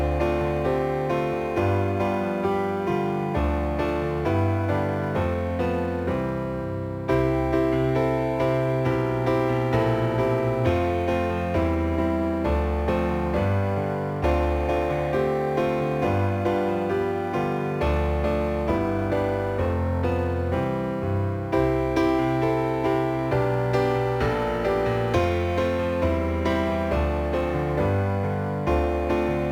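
From start to finish, the audio carries crude rate conversion: a gritty, inharmonic fizz riding on the louder and brighter passages, sitting roughly 35 dB below the signal. The pattern points to a change from 44.1 kHz to 48 kHz done by simply repeating the nearest sample. Unlike steady hiss or quantisation noise, this error moves with the material and adds tones unrelated to it, vanishing in quiet, dull moments.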